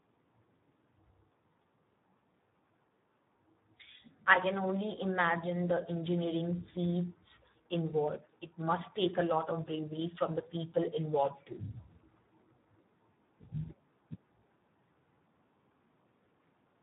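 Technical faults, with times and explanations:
Throughout, Speex codec: the speech sounds hoarse and grainy, with heavy damage that edges toward a robotic buzz. That's what happens when a CELP coder like Speex runs at a low setting. The sound points to around 8 kbps, which leaves very few bits to describe the excitation, so the fine detail of each voiced sound gets swapped for a rough approximation. Nothing comes through above about 3.8 kHz, which gives the whole clip that dull, narrowband telephone feel.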